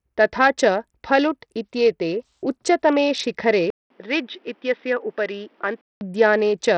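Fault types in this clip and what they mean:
Bluetooth SBC compression: Throughout the clip the speech has a gritty, grainy edge, and its treble thins out and flickers from moment to moment, with aliasing riding on the sound. The damage is heavy, which fits a data rate around 64 kbps. The likely cause is Bluetooth's default SBC codec: with so few bits to share among its sub-bands, the upper bands are starved and the rest are only coarsely quantised.
Input switched to a poorer device: Right after "इत्येते उच्चतमे शिखरे", at 3.70 s, the sound drops out for about 200 ms. It then returns dull and boxy, with nothing above 3.9 kHz, a few decibels quieter and carrying a new, faint background noise. At 6.01 s the fuller sound comes back. The likely cause is the recording input changing mid-clip to another microphone or a headset's call profile, whose narrower band and different tone, level and noise are audible here.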